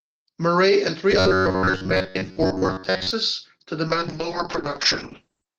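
From 1.12 to 3.11 s the speech turns into a rigid, metallic buzz pinned at about 94 Hz that still loosely tracks the words. That's robotic sound from repeated short buffers, likely a roughly 11 ms chunk replayed over and over to cover late audio, with most of the real signal skipped.

At 3.89 s a call bitrate drop sets in and runs to the end of the clip. The encoder falls from 32 to 6 kbps and the bandwidth shrinks from 20 kHz to 8 kHz, so the speech goes muffled and rough, staying at its lowest for about 1.7 s.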